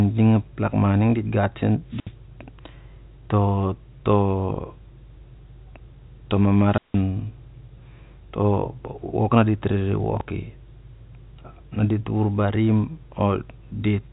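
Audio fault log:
1.87–2.14 s and 6.64–7.06 s, wireless microphone squelch dropout: right after "ning dit gat sen", and again later, the fading radio signal brings up a brief rush of hiss before the receiver's squelch cuts the output, leaving holes of about 68 ms and 166 ms. On a spectrogram each appears as a broadband noise smear followed by a blank band, and on the waveform as a flat gap.
10.17–10.21 s, chunks out of order: a 10 ms chunk of audio plays after material that should follow it, displaced by about 30 ms. This causes a short garbled stutter with three hard joins. The waveform shows abrupt discontinuities in the telephone-band signal, which stops near 3.8 kHz.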